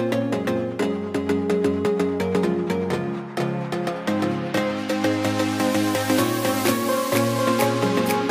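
A doubled audio track runs throughout: a second full-band copy, roughly as loud as the original, trails about half a second behind with no decay or room colour. On a waveform or spectrogram every event appears twice, offset by that gap, likely from a slower second capture path.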